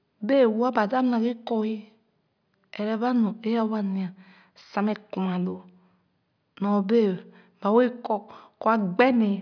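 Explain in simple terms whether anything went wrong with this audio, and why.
Nothing went wrong here.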